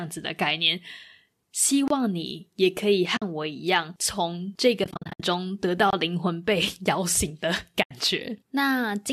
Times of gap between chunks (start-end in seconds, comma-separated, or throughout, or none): 1.88-1.90, 5.90-5.93